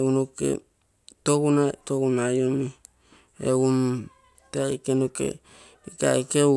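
No technical faults are audible.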